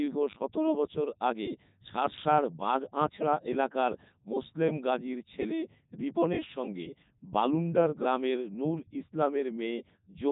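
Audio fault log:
Throughout: Codec 2 vocoder, heavy damage; speech is resynthesised from pitch and envelope at 3.2 kbit/s, sounding buzzy and robotic; spectrogram shows nothing above 3.8 kHz.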